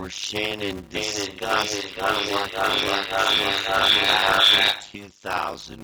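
Right from the start and all the way through, there's a block size mismatch (padded). The stage feeding the next one hands over short blocks, which fits 256-sample blocks going into a stage that reads about 480, and the leftover space in each block is filled with silence. Those little gaps repeat at 100 Hz, so you get a steady buzz under the speech, and everything plays at 0.533 times normal speed while the timbre stays about where it should be.

At about 0.96 s a feedback howl kicks in and keeps going until about 5.1 s. Two devices on the same call are clearly hearing each other, and the loop from microphone to speaker and back keeps adding level, so each pass comes back louder instead of dying away. It narrows to a whistle somewhere around 3 kHz, peaking at about 8 dB above the speech, and it pulses roughly every third of a second, which matches the loop's round-trip delay. The call's microphone processing is also in the chain, and it takes out the lowest bass, as it normally does.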